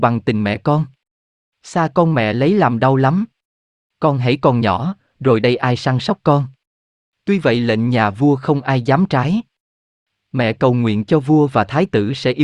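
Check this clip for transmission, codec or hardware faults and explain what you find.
No faults can be heard anywhere in this speech recording. There is nothing here that needs explaining or fixing.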